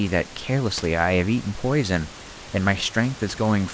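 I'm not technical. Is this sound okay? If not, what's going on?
Yes, this recording has no technical faults: the faint background noise of the room sits well below the speech, and the call connection it travelled through carries it the way a normal internet call does.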